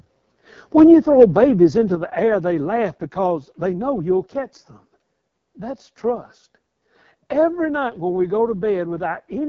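AMR wideband (HD Voice) codec damage runs throughout the speech. The rough, raspy texture fits its lowest 6.6 kbit/s mode, where the pulse-driven vocal tract model is starved of bits. Nothing is present above about 7.4 kHz, and the top band is filled with shaped noise.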